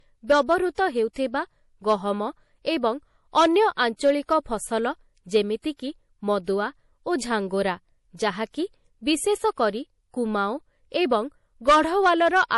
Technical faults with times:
0.00-12.58 low-bitrate audio saved at a high bitrate

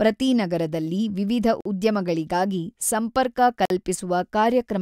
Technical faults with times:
1.61-1.65 gap between chunks
3.65-3.70 gap between chunks

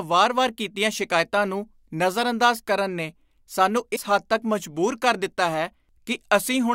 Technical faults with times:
3.95-3.98 broken MP3 bit reservoir

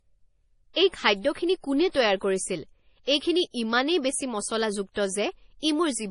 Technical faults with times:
0.00-6.10 MP3 compression
3.06-3.08 pre-echo

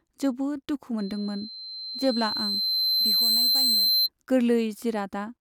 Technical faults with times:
0.98-4.09 loudspeaker feedback squeal

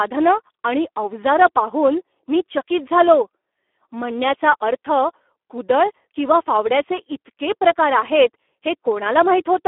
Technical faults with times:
0.00-9.67 Speex codec

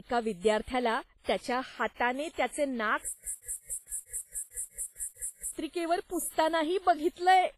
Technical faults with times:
0.00-7.57 WMA compression
3.13-5.51 stutter with silent gaps

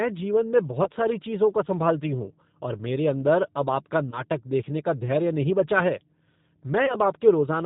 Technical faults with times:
0.00-7.65 G.729 codec
0.84-0.91 VoIP packet loss concealed by the speech codec
4.10-4.21 VoIP packet loss concealed by the speech codec
6.86-6.99 VoIP packet loss concealed by the speech codec

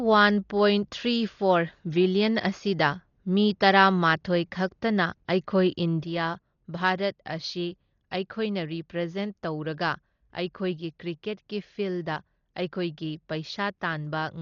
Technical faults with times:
0.00-14.42 Dolby Digital compression
6.05-14.42 one channel drops out

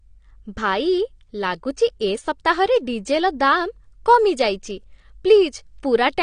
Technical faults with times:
0.00-6.22 AAC compression

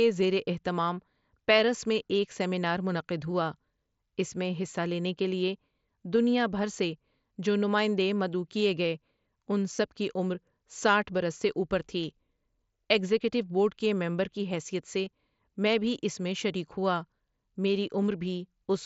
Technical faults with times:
9.76-9.78 concealed Bluetooth headset packet loss
15.05 concealed Bluetooth headset packet loss

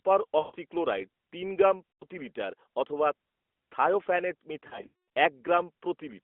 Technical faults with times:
0.40-0.56 lost AMR speech frames
1.93-2.05 lost AMR speech frames
4.68-5.05 lost AMR speech frames

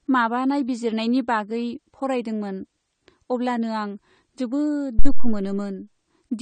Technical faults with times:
0.00-6.42 AAC compression
4.99-5.45 phantom power thump

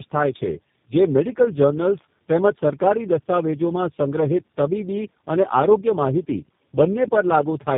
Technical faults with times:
0.00-7.78 tandem speech coding

